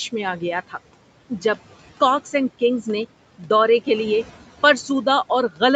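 All the way through there are noise suppressor artifacts: the background gets pulled down by about 17 dB between phrases and rises again under the speech. At 3.38 to 3.50 s, right after "کاکس اینڈ کنگز نے" and before "دورے کے لیے", the suppressor mistakes a bit of speech for noise and ducks it by about 15 dB, so it sounds swallowed. The same speech cut by the noise suppressor happens again at 5.49 to 5.61 s, a tenth of a second turned faint.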